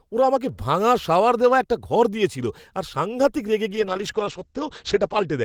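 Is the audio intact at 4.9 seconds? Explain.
No. At 4.9 s the speech sounds muffled and rough, with a watery, smeared texture and the crisp top end gone. This is a call bitrate drop that begins at 3.69 s, just after "দিয়েছিল আর সাংঘাতিক রেগে", and lasts to the end. The encoder's rate fell from 32 to 10 kbps and stayed at its lowest for about 1.56 s. It codes the signal coarsely and has narrowed the bandwidth from 20 kHz to 8 kHz.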